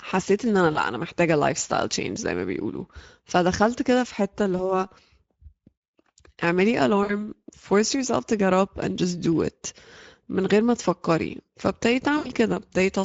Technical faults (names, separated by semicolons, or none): Speex codec; VoIP packet loss concealed by the speech codec